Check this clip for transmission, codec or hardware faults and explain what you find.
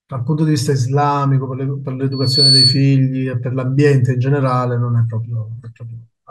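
One fault is present, a loudspeaker feedback squeal from 2.12 to 2.87 s. A microphone is picking up its own loudspeaker, and the loop gain at 4.4 kHz tops unity. The tone swells over roughly a third of a second to somewhat louder than the speech. That build-up, rather than a constant level, separates it from a steady interference whistle.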